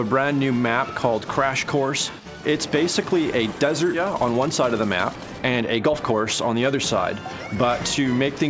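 At 3.94 s there is a skip ahead. Roughly a second of sound is missing. Nothing fills the gap. The two sides are joined almost directly, so playback jumps forward abruptly. Delayed audio was likely discarded while later audio was already waiting.

A jitter buffer speed-up follows from 4.10 to 6.75 s. The sound runs about 11% faster at unchanged pitch. Around 300 ms is trimmed away in small pitch-period slices. A milder one, at 105%, runs from 7.55 to 8.43 s and removes about 50 ms. Both passages sound hurried. The band stops at 8 kHz, which fits G.722 at 64 kbps.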